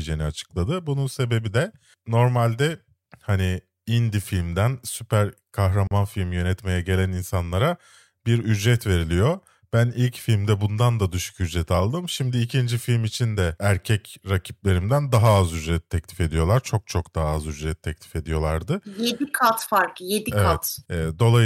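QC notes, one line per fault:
5.87–5.91 s, block of digital silence: after "hani indie filmden süper" the sound cuts to silence for 37 ms. The abrupt cut and return come with no fade or masking, unlike a concealed dropout.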